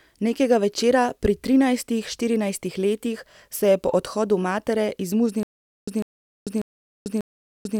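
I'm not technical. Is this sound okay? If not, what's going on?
No. At 5.43 s, just after "je po odhodu matere", playback likely stalled, giving a stutter with silent gaps: a 0.15-second scrap of speech repeats 4 times, each followed by about 0.44 s of dead silence, every 0.59 s, to the end. The missing speech is gone.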